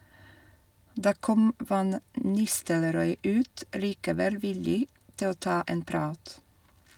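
A speech clip with nothing technically wrong with it.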